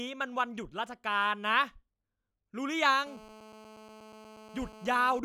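GSM phone buzz runs from 3.07 s to 5.2 s, near the end of the speech. A 2G handset close to the recording chain is transmitting in bursts about 217 times a second, and some stage of the audio circuitry rectifies those radio pulses into the signal. The result is a hard, raspy buzz at 217 Hz, dense with harmonics and unrelated to the speech, sitting about 21 dB below it. It is nearly steady, consistent with a phone on a call.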